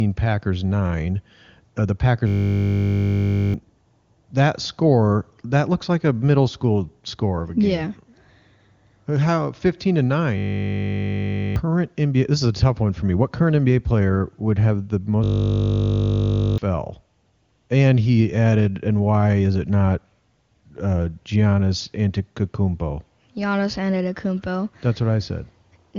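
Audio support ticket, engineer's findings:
System hang loop at 2.28–3.54 s, 10.38–11.56 s and 15.24–16.58 s (after "player would have the"). Steady 50 Hz buzz. Driver/host stalled while the device recycled one 20 ms ring-buffer segment, 59–67 repeats. Roughly 1–1.5 s of speech lost each.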